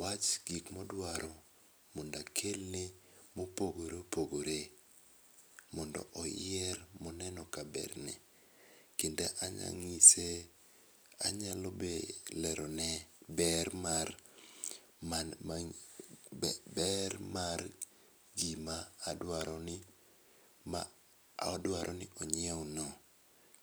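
No technical faults can be heard anywhere in the recording.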